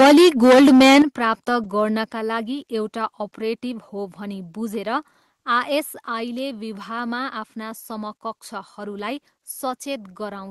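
From the start to 1.02 s the speech has a hard, crackling edge on every loud syllable, with peak tops flattened across around two fifths of the signal. This is microphone overload: the input was likely driven about 14 dB past the converter's ceiling, so peaks were cut off.

At 1.02 s the whole signal, speech and background alike, drops abruptly by about 9 dB in a single step, and the crackle clears. This is the microphone volume stepped down, likely the call software reacting to the clipping by lowering the device's input level.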